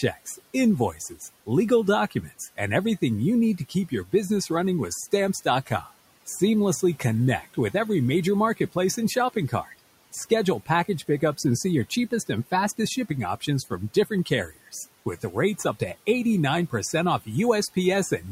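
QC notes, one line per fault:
0.02–1.48, 2.1–2.59, 3.58–4.49, 5.12–7.74, 8.57–15.81 and 16.7–18.23 s: speech cut by the noise suppressor. Soft consonants and word endings are mistaken for noise and pulled down with the room noise, by about 10 to 16 dB, leaving them faint. Unlike a dropout, the sound dims rather than vanishing.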